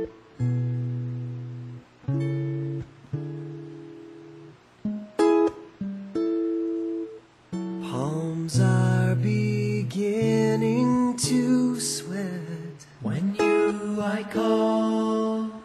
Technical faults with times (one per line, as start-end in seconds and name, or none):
none